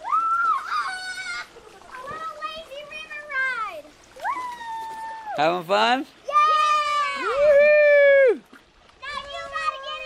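At 7.61 s a Bluetooth SBC bit pool drop sets in and lasts to the end of the clip at 10.06 s. The link appears to have been starved, and the encoder cut its bit budget roughly in half, which fits a fall from a bit pool of 31 to 15, around 105 kbps. With so few bits the top sub-bands go nearly empty, so the treble turns dull and a gritty grain settles over the audio. A spectrogram would show the upper band abruptly darkening, with speckled noise filling the remaining bands.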